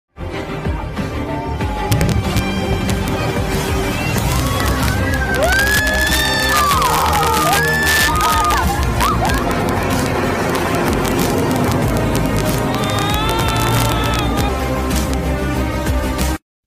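Integer overflow runs throughout: with about 2 dB too much gain, a small fraction of peaks wrap to the opposite sign, giving sharp cracks, seen as full-range waveform flips and vertical broadband spectrogram streaks.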